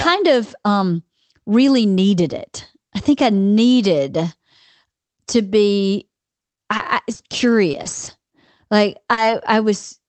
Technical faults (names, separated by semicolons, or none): repeated packet loss (robotic sound); short concealed packet loss